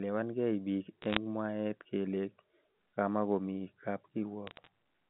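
This is speech over a telephone line, limited to roughly 150 Hz to 3.4 kHz. Two bursts of bit errors on a digital phone line put sharp ticks and crackle over it. The first runs from 1.02 to 1.17 s, just before "mwaet kele". The second runs from 4.47 to 4.67 s, just after "kamakomi kab". Flipped bits corrupt single samples. Hits on sign or high bits give the loudest clicks. The first burst is denser, around 0.4 percent of bits.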